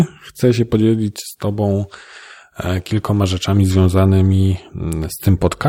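Hard clipping hits the speech three times, from 0.44 to 0.75 s, 3.77 to 4.08 s and 5.29 to 5.67 s. In each stretch the signal runs about 2 dB past what a stage can pass, so the loudest peaks are sheared off flat. On the waveform those peaks sit pressed against a level ceiling. On a spectrogram, bright vertical streaks of harmonics reach high up. By ear it is a brief rasp or crackle on the stressed moments.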